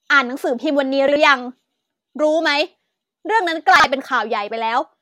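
A speech clip with chunks out of order, twice: at 1.08 to 1.16 s and at 3.76 to 3.84 s. Each time, a 40 ms chunk plays one chunk late, after the one meant to follow it. Nothing is lost. The swap causes a brief jumble at the hard joins.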